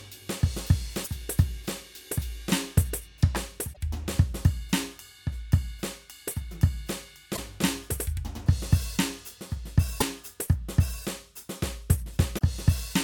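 Brief glitches break into the music at 1.01–1.08, 3.70–3.78, 7.33–7.39, 9.97–10.03 and 12.34–12.42 s, caused by damaged data in a compressed stream that makes the decoder lose frame sync.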